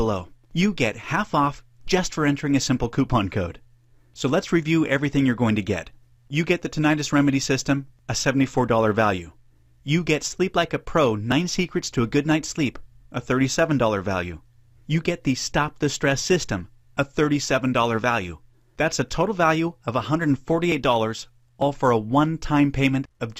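Small jumps in the sound occur at 11.32, 20.72 and 21.62 s. Each is likely a dropped buffer (overrun), losing a brief slice of audio.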